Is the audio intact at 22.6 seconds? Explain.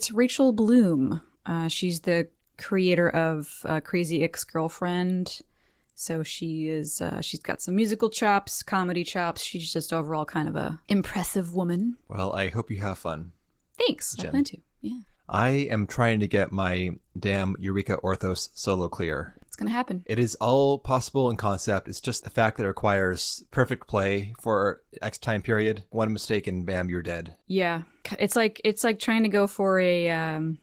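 No. Opus voice compression runs through the whole clip, including 22.6 seconds. The sound is coarse, slightly hoarse and robotic, which fits hybrid coding at about 16 kbps. The spectrogram would show blotchy, smeared content above 8 kHz changing in 20 ms blocks.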